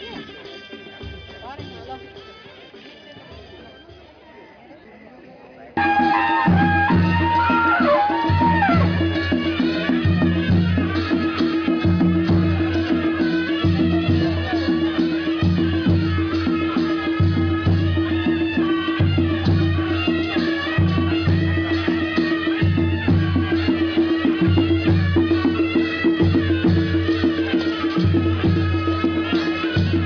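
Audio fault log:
Nothing stood out on listening.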